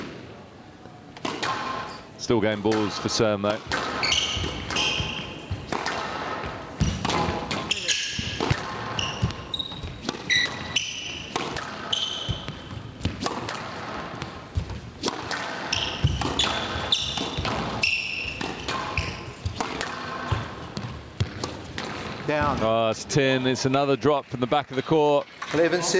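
Gain pumping runs throughout: the level swings by roughly 15 dB, loud and soft parts ending up closer in level and the sound squashed, likely from excessive microphone gain driving a fast limiter.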